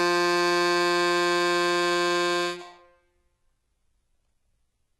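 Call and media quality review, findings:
Treble across the whole music clip gritty and metallic, harmonics misaligned above a crossover, nothing above 11.8 kHz. Likely HE-AAC compression, heavy damage fitting roughly 16 kbps. Replicated bands, not dull low-pass treble, separate it from ordinary band-limiting.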